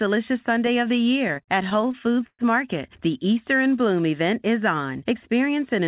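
Speech heard through a narrowband call line, with nothing above 4 kHz. From 1.28 to 2.42 s there are repeated stalls, a stutter. Sixteen short holds stretch the sound, the longest 122 ms, about a quarter of that span. Nothing is lost, but it drags. Late-arriving packets kept draining the jitter buffer, so the receiver extended the last sound each time.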